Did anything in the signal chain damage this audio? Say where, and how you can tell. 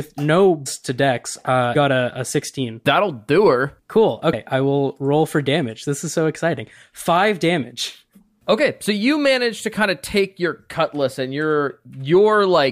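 Yes, at the codec decoding stage: compressed frames are skipped at 0.65 s (just before "to dex uh"), 1.74 s (between "to dex uh" and "a a sixteen") and 4.32 s (just before "I will roll for"). Each jump drops a run of whole 23.2 ms frames, roughly 300, 200 and 150 ms of speech. On a spectrogram, the formant tracks break off and resume at unrelated points.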